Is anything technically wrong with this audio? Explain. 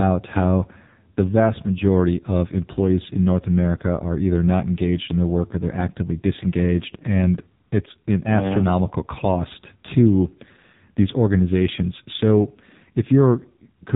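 Yes, the whole clip has been through the AMR narrowband mobile codec: nothing above 3.8 kHz, and heavy buzzy, synthetic vocal-tract modelling that points to a very low bitrate, around 6 kbps.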